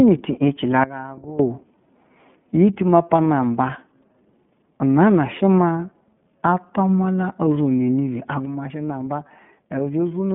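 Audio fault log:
throughout, iLBC codec: band-limited, slightly rough and synthetic speech with nothing above 3.7 kHz, from independent 30 ms frame coding at a rate that fits the 13.33 kbps mode.
0.84–1.39 s, sudden gain jump: just after "no ti yece la" the speech and background abruptly drop about 17 dB, then snap back, likely from an unramped gain change.
8.45–10.35 s, sudden gain jump: level and noise floor abruptly fall about 6 dB and stay down to the end, likely from a gain step applied without a ramp.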